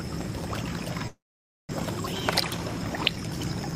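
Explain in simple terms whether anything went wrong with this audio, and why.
Two things go wrong. From 1.07 to 1.73 s there is a long network dropout, likely caused by audio failing to arrive. The last sound is stretched into a short fading buzz, then most of the gap is silent. About 0.4 s of the original never plays.

From 1.80 s to the end there is a jitter buffer speed-up. Delayed audio built up, so the player trims tiny slices to catch up. The sound runs about 10% faster at the same pitch and feels hurried, dropping roughly a fifth of a second overall.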